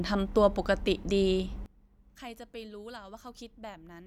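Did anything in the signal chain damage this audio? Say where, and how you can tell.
Yes. One channel inverted, from 1.66 s to the end of the clip: the speech drops by about 21 dB and only a faint residue of the voice survives. This points to one stereo leg having its polarity reversed, likely a swapped conductor in the analogue wiring. When the two channels are summed to mono, the centred voice, common to both, cancels and leaves only their small differences.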